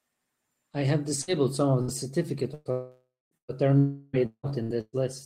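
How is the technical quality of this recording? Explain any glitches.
Poor: the speech is interrupted by a chain of network faults that gets denser from just past one second to nearly five seconds.

Burst of packet loss at 1.21–1.30 s, 1.81–1.91 s, 2.54–2.68 s and 3.37–3.51 s. Each time a short run of audio never arrived: about 60 ms in the first two and 120 ms in the last two. The receiver stretched the last sound across the hole, so you hear a brief held buzz or hiss that fades before speech jumps ahead. At 3.37 s that fill dies into roughly 110 ms of silence. On a spectrogram each shows as a short smear of flat, held sound, and the waveform shows a decaying, oddly regular stretch.

Two longer interruptions, at 2.71–3.34 s and 3.78–4.16 s, are likely a long network dropout. The first loses about 0.6 s of speech. The held sound fades away and the final 230 ms or so is silence. The second loses about 0.36 s and stays filled with the fading buzz or hiss the whole way. 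A spectrogram shows blurred, stationary bands thinning toward empty space, and the waveform of the first tapers to flat before speech resumes.

Repeated packet loss (robotic sound) follows at 4.19–4.96 s: five separate gaps, the longest about 172 ms, with roughly half of that span patched over. Because the holes come in quick succession, each concealment barely ends before the next starts, giving choppy speech with pieces missing. On a spectrogram it looks like alternating strips of real speech and frozen, smeared harmonics, and the waveform shows a chopped, irregular envelope.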